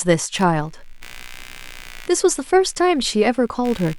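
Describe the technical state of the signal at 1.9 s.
At 1.9 s the speech carries a buzzy, chirping undercurrent that pulses about 70 times a second, sitting roughly 25 dB below the voice. It runs from 0.36 s to the end of the clip and doesn't follow the speech's rhythm. This is computer activity noise: load changes in the processor, graphics card or mouse disturb the ground the audio circuit shares with the computer, injecting a buzz that tracks the machine's workload.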